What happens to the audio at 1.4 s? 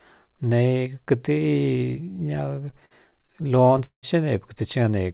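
Nothing goes wrong at 1.4 s: the speech carries on intact through the call path, with the narrowband G.711 sound that has nothing above 4 kHz.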